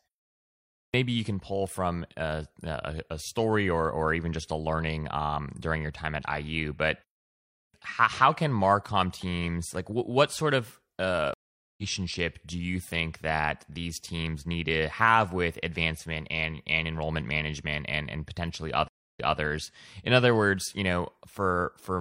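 A speech recording with two kinds of fault. The first is clipped start after a pause: at 0.55 s and 7.39 s the output device has gone idle in the preceding silence and wakes too late, swallowing about 0.39 s and 0.35 s respectively. The phrases "you can pull from" and "how how can" therefore begin abruptly, missing their onsets. The second is stream reconnect: the connection drops, the player goes silent, then restarts a fresh decoder mid-stream. At 11.34 s, right after "what sort of uh", there is 0.44 s of silence and playback resumes roughly 0.4 s further on, skipping material. At 18.88 s a 0.27 s gap is followed by audio resuming 0.23 s earlier, so a short stretch repeats, consistent with the server resending a burst.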